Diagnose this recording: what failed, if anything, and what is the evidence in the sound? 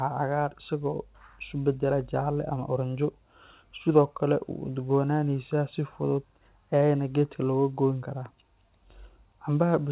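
Nothing in the recording points to a failure at any stage of the chain. The speech comes over a normal mu-law telephone path at 8 kHz, so nothing above 4 kHz is present, and a faint quantisation hiss about 38 dB below the signal rises and falls with its level.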